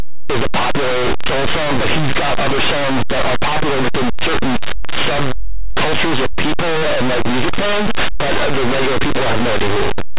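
From start to finish the speech is wrecked by linear audio read as companded: plain 8-bit samples are being expanded as mu-law codes. Values just on one side of zero jump to huge outputs while those on the other side stay small, so you get very loud, harsh distortion.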